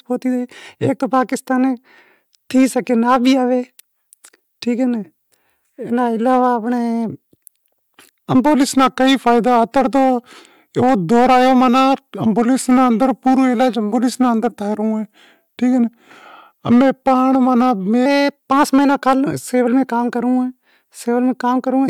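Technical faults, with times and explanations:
Throughout, hard clipping: the speech is driven about 9 dB past what the signal path can pass, so roughly 2% of samples have their peaks sliced flat. Those flat tops add high harmonics, giving a crackle on loud syllables rather than the smeared, watery sound of codec loss.
8.55 to 18.06 s, section at the wrong speed: this stretch plays at 0.893 times its proper rate, so pitch drops about two semitones and timing slows together. The voice turns deeper and more sluggish, likely from playback on a mismatched clock, unlike pitch shifting, which leaves tempo intact.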